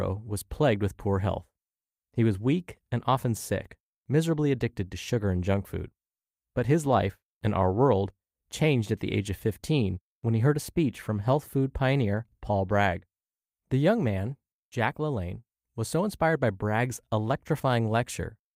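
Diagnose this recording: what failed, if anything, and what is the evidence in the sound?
Nothing failed, and there is no evidence of a fault anywhere in the sound of this recording.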